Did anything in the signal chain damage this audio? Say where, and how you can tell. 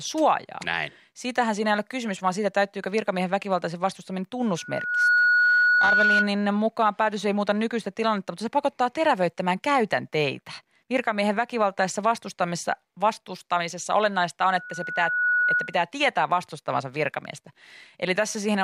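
Yes: loudspeaker feedback squeal in the playback path, 4.57–6.33 s and 14.43–15.79 s. A 1.5 kHz tone swells over the speech because the microphone-to-loudspeaker loop gain exceeds one.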